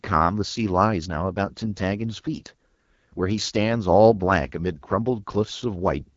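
Speech with a rough, raspy, buzzy grain throughout and nothing above 7.5 kHz, the sound of the AMR wideband (HD Voice) codec at one of its lowest rates, around 8.85 kbit/s.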